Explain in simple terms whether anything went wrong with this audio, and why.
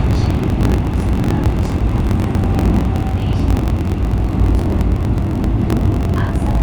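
Something went wrong throughout, from the first second to the last: a block size mismatch (truncated). One stage hands over chunks of audio longer than the next stage takes in, so the tail of every chunk is dropped. You hear a steady buzz at about 46 Hz, matching the chunk rate, which fits 1024-sample blocks. The sound also runs about 1.07 times too fast while keeping its normal pitch. A plain speed-up would raise the pitch, and random dropouts would not buzz at a fixed rate.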